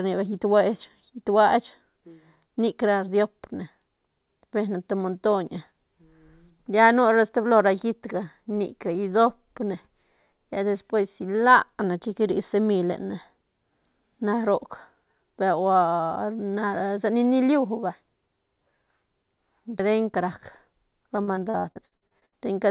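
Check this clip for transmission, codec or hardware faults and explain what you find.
One transmission fault, near the end. From 21.16 to 22.34 s the speech turns choppy and robotic. This is repeated packet loss: about a dozen holes, the longest 65 ms, patched by stretching the previous sound, so over a third of the stretch is filler. Throughout, the call path leaves nothing above 4 kHz, which fits narrowband G.711 mu-law.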